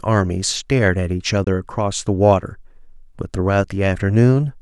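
At 1.44 to 1.47 s the speech drops to silence for about 30 ms, then carries on further along, skipping roughly 20 ms of sound. This is most likely a Bluetooth dropout, consistent with a single wireless packet arriving too late to play.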